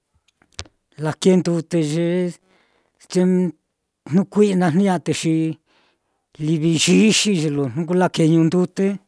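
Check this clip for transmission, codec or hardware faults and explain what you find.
Nothing stood out on listening to this speech recording.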